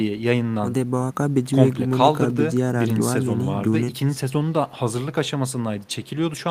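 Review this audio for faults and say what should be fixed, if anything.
No faults detected in the speech recording, so nothing needs fixing.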